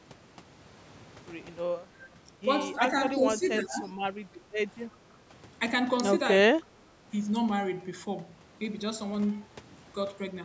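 At 2.01 to 2.07 s and again at 3.84 to 3.92 s, a faint copy of the speech returns 318 ms late, well below the main level, the second time even quieter. This echo leak likely comes from a far-end echo canceller letting loudspeaker pickup through. Unlike a dropout, it adds sound rather than removing it.

Between 2.78 and 5.18 s, in stretches at 2.78, 3.14 to 3.45, 3.62 to 3.92 and 4.92 to 5.18 s, the speech itself ducks by a few dB up to roughly 15 dB. This is speech suppressed in double talk, likely an echo canceller turning down the near talker while the other side spoke. It takes level away without adding any delayed copy.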